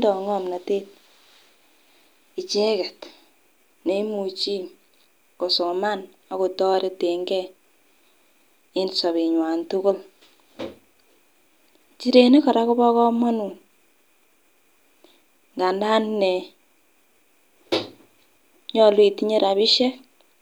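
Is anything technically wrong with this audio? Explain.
No, nothing technical stands out here; the speech comes across just as you'd hope, with nothing to flag.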